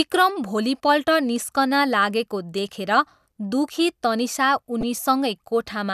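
At 4.81 to 4.83 s, a corrupt frame was decoded. Flipped bits in a few frames misplaced energy across frequencies. It sounds like a brief chirp, squeak, blip or burst of noise.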